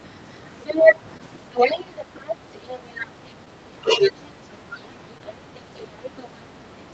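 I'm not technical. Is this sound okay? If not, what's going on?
No. A second voice, most likely the other side's voice leaking through, is audible from 0.34 to 3.07 s at about the talker's loudness, and again, quieter, from 3.99 s to the end.

Short concealed packet loss causes brief smears at 1.17, 3.45 and 5.18 s. Each time, about two hundredths of a second went missing and was patched over.

Speech suppressed in double talk makes the talker dip in pieces between 2.51 and 4.81 s, likely because both sides spoke at once. It happens again, more deeply, from 6.60 to 6.76 s.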